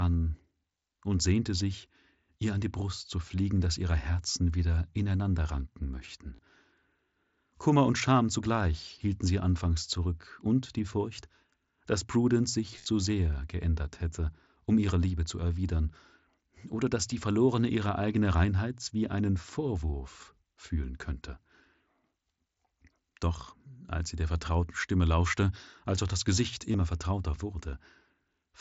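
Concealed Bluetooth headset packet loss occurs at 6.36–6.39 s after "wieder ineinander ranken", 12.77–12.86 s before "sehr geändert hätte um", and 26.72–26.74 s. The phone patched each lost stretch with a copied recent waveform cycle, so a short buzzy tone holds at full level, not a silent dropout, then warbles as real audio returns.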